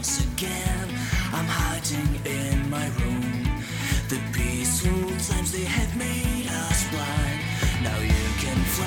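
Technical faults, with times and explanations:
No technical faults detected.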